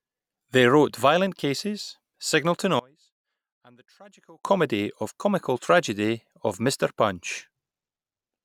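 From 2.79 to 4.45 s, speech falls about 28 dB to a faint trace. Likely cause: one channel inverted, cancelling the centred voice in mono.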